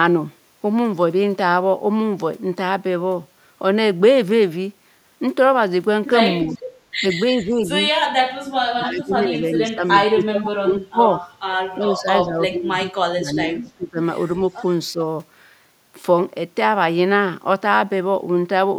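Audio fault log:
6.45–14.99 s, speech suppressed in double talk: the voice drops by about 5 to 25 dB at 6.45–6.62, 7.01–7.7, 8.66–11.24, 11.78–14.0 and 14.92–14.99 s, most deeply in the two long spans. The original voice is turned down rather than joined by an extra copy, likely because an echo canceller ducked both talkers at once.
6.49–12.26 s, echo leak: a faint repeat of the voice arrives about 380 ms late at 6.49–6.54 s, about 20 dB down, and at 11.85–12.26 s, about 15 dB down. This is an added delayed copy, not a dip, likely loudspeaker echo the canceller failed to remove.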